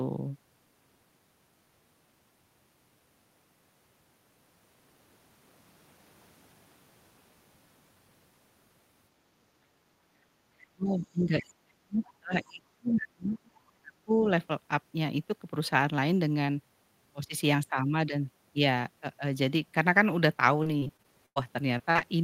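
At 10.58 to 10.65 s, a brief scrap of a second voice slips in underneath, faint and far below the speech. This is the other side's voice leaking through. Its likely cause is an echo canceller that left a trace of loudspeaker sound in the microphone signal.

From 10.72 to 13.59 s, the speech is pushed down hard, in places to near silence, for about two seconds in total. The same happens more lightly from 13.81 to 14.25 s. This is speech suppressed in double talk. Both sides likely talked at once, and the echo canceller turned everything down.

From 20.63 to 21.38 s, repeated packet loss gives a choppy, robotic stretch. Several holes follow close together, the longest about 99 ms. About a quarter of that span is patched by stretching the last sound, so pieces drop out.

Three short concealed packet losses follow, at 21.78 s, from 21.91 to 21.97 s, and from 21.99 to 22.03 s. Each hole lasts a few hundredths of a second. 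The decoder fills it by continuing the last sound, which leaves brief smears or wobbles.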